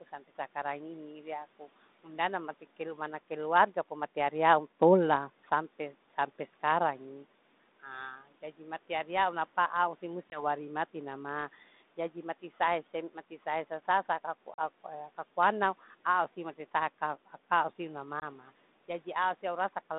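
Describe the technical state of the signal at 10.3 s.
At 10.3 s a packet is lost on the ADPCM call, leaving a hard-edged 20 ms silence. The decoder's predictor and step size drift from the sender's, so sound resumes slightly distorted, settling by 10.43 s, before "mati na ma jadi".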